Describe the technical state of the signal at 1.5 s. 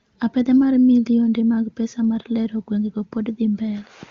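At 1.5 s the speech is intact, carried through the AMR wideband (HD Voice) codec at 23.85 kbit/s, which fits a connection running at the codec's top rate.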